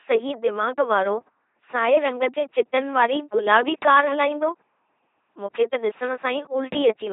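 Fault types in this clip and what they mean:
LPC-10 vocoder: the speech has gone through a very low-rate parametric coder consistent with 2.4 kbit/s LPC-10. It discards the real waveform and rebuilds each frame from a small all-pole vocal tract filter driven by either a pulse train or noise. Throughout this clip the damage is heavy: every instant is forced to be wholly voiced or wholly unvoiced, giving a flat, buzzing robot timbre, with nothing above 3.8 kHz.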